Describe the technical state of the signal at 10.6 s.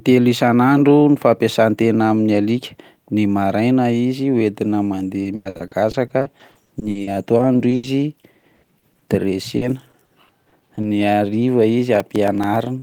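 At 10.6 s the signal is inside a stretch of repeated packet loss (robotic sound), 9.57 to 10.85 s: seven dropouts, each up to 40 ms, patched by extending prior audio, giving choppy speech with pieces missing.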